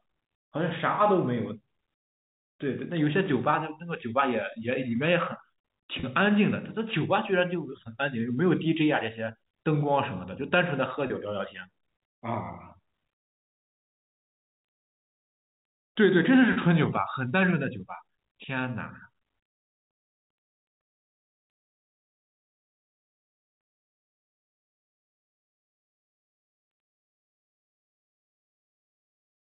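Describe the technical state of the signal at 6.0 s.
At 6.00 to 6.03 s there is packet loss with pitch repetition. About 30 ms of the speech stream drops out, consistent with a single lost packet. The receiver bridges the gap by replaying the last pitch period, so the sound briefly holds as a slightly buzzy, sustained tone before normal speech resumes.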